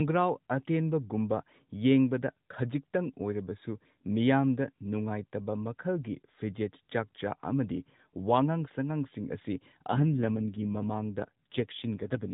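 An AMR rate drop sets in at 9.89 s and lasts to the end at 12.33 s in this speech clip: the mobile codec falls from 12.2 to 5.9 kbps, most likely because a weakening radio link forced the network to trade speech bits for error protection. The band stays narrowband with no gap, but the voice turns rougher and buzzier, its fewer excitation pulses per frame giving a more synthetic quality than the lightly coded AMR-NB before it.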